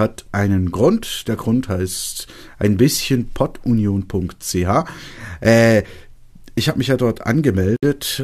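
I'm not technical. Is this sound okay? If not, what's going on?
No. Near the end of this speech, at about 7.76 seconds, the sound drops out for roughly 63 milliseconds and then resumes exactly where it stopped, at 7.83 seconds. This is a gap at a join of encoded pieces. The recording was saved in separate sections, and each section carried a short stretch of built-in silence at its edges. When the sections were stuck back together, that silence wasn't trimmed, leaving a brief hole with blurred edges.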